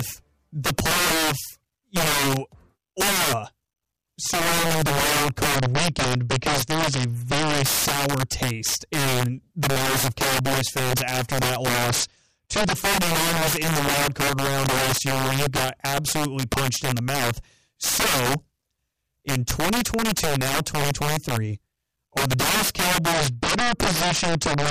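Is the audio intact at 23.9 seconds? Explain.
No. Throughout the clip, including at 23.9 s, integer overflow is present. Loud peaks driven about 11 dB past the integer limit wrap to the opposite sign instead of being limited, so roughly 7 percent of samples jump across the full range, giving violent cracks far harsher than clipping.

From 23.13 s to the end, there is also a Bluetooth SBC bit pool drop. The link starved the encoder of bits, which fits a bit pool cut from 28 to 9, near 78 kbps. The upper sub-bands lose their bits and the rest are coarsely quantised, so the speech turns dull and gritty.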